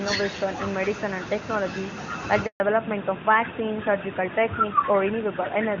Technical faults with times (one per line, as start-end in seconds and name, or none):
0.00-5.80 echo with no canceller
2.46-2.60 handover gap
2.60-5.80 fallback to narrowband